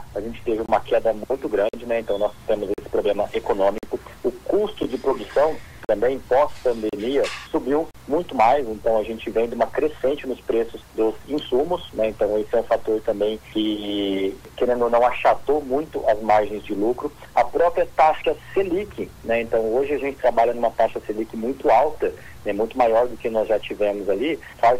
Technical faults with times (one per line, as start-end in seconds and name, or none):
0.66-0.69 gap between stream segments
1.69-1.73 gap between stream segments
2.74-2.78 gap between stream segments
3.78-3.83 gap between stream segments
4.83 gap between stream segments
5.85-5.89 gap between stream segments
6.89-6.93 gap between stream segments
7.91-7.95 gap between stream segments